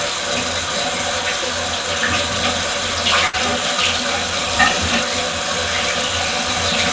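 A burst of packet loss runs from 3.27 to 3.35 s. Several consecutive packets never arrived in time, so the receiver stretched the last sound it had and let it fade, roughly 60 ms of concealment that comes across as a brief smeared hiss rather than a clean gap. Playback then picks up about 60 ms further along, so that stretch of the sound is simply gone. Throughout, nothing is heard above 8 kHz, which fits a wideband call codec.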